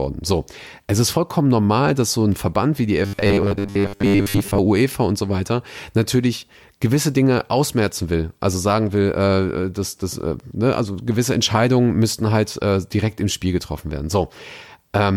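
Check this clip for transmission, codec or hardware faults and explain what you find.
One fault stands out, robotic sound from repeated short buffers, from 3.03 to 4.58 s, just after "wie die". The speech turns into a rigid, metallic buzz fixed at 100 Hz, tracking the syllables only loosely. This is likely a stream arriving too slowly: the decoder keeps replaying the last chunk of audio while fresh material is skipped, and a 100 Hz drone fits a 10 ms chunk looping for most of that stretch.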